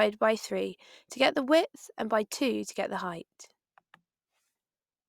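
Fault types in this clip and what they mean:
No audible faults detected.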